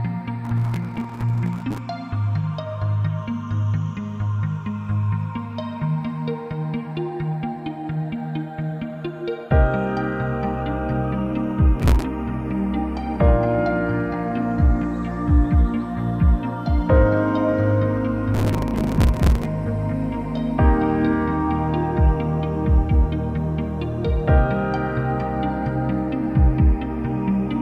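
Processor overload crackle tears through the sound at 0.45–1.78 s, 11.80–12.05 s and 18.34–19.45 s. Dozens of missed deadlines, fitting buffers of about 5 ms, replay stale audio with hard edges. These show as dense vertical broadband streaks on a spectrogram and jagged repeated slices in the waveform.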